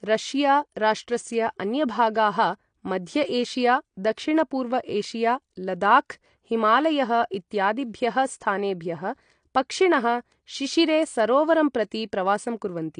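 From start to finish the speech carries plainly audible AAC compression damage, likely from AAC-LC coding at a low bitrate, which fits roughly 32 kbps. The encoder discards everything above about 9.8 kHz and quantises the remaining bands coarsely, so the sound is dull and smeared, with a warbling, fizzy texture on sibilants and held sounds. A plain low-pass filter would dull the top end without that swirling, unstable grain.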